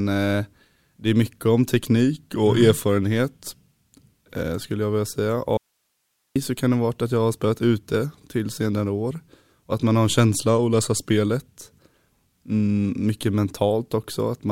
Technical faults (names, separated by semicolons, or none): audio dropout to a faint residue